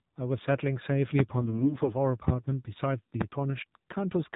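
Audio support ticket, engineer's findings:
AMR narrowband mobile codec, whole clip: speech band-limited to 4 kHz, buzzy and synthetic. Fits a low AMR-NB mode near 7.4 kbps; pulse-driven vocal-tract model starved of bits. Steady across the clip, unlike the brief local damage below.

Loud pop, 1.19–1.22 s, 2.28–2.31 s, 3.21–3.24 s: single sharp pops about 20 dB over the speech, roughly 30 ms each, speech continuing underneath. Likely a connector, switch or static voltage step. Added on top, not a distortion of the speech itself.

AMR bit errors, 1.42–1.95 s: speech turns hoarse, scratchy and gargly, pitch and level roughly kept. Flipped low-priority frame bits, around 7 percent, misplace excitation pulses and skew fine gain and spectrum values. Half a second of texture change, not clicks.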